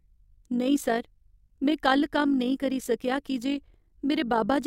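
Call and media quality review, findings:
Overlap-add ripple on speech, whole clip. Level pulses about 6 dB each frame, around fifty times a second: rough robotic flutter. Frame overlap in resynthesis doesn't sum to constant gain.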